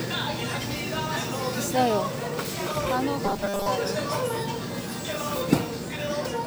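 From 3.26 to 3.67 s, robotic sound from repeated short buffers. A rigid metallic buzz at 200 Hz is heard. A 5 ms buffer was likely replayed, replacing most of the audio.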